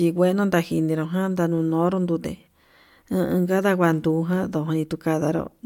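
Nothing in the speech stood out as a technical problem on listening.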